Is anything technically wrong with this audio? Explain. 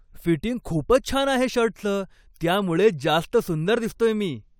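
No, nothing technically wrong can be heard here.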